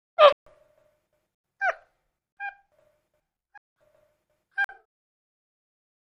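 The audio drops out five times, each a block of digital silence. It cuts to silence at 0.33–0.46, 1.35–1.44, 2.32–2.37, 3.58–3.76 and 4.64–4.69 s. Gaps run 46 to 186 ms. The lengths fit whole buffers of 2048, 4096 and 8192 samples left unfilled in time.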